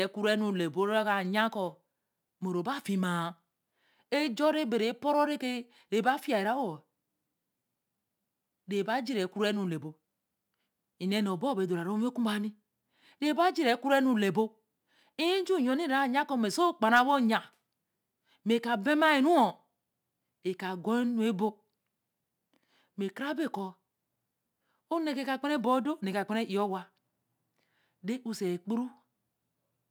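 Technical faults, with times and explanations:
Throughout: sample clock jitter. The converter's clock wavers by roughly 4 microseconds, so each sample lands a little early or late and picks up an error that scales with how steeply the speech waveform is moving. The result is a fine hiss or grain about 30 dB below the signal, strongest on loud passages and sibilants and gone in pauses. On a spectrogram this shows as broadband haze riding under voiced energy, brightest where high frequencies are present. The waveform looks unchanged.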